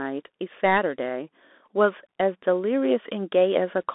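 A speech recording carried through a Bluetooth CVSD headset codec for its whole length. The band is squeezed to roughly 250 Hz to 3.6 kHz, with nothing above 3.8 kHz. The codec sends one bit per sample, just up or down, with an adapting step size. That fits a 64 kbps CVSD link. Fast, loud high content outruns the step and distorts. S sounds turn scratchy, and a granular hiss sits under the speech. The damage is plainly audible.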